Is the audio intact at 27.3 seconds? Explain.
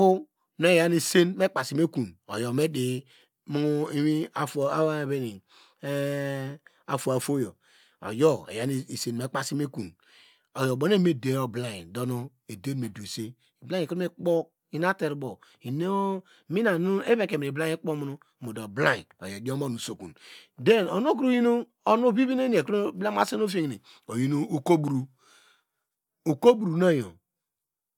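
Yes, the audio is intact at 27.3 seconds, with no fault at that moment.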